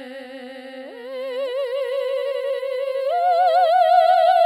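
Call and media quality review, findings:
Doubled audio track, throughout the music. Full-band second copy trails by roughly 0.7 s, about 5 dB down, with no decay or room colour. Likely cause: a second, slower capture path or misaligned edit layering two copies. Spectrogram shows every onset repeated at a fixed offset; waveform shows transients echoed identically, about 5 dB lower.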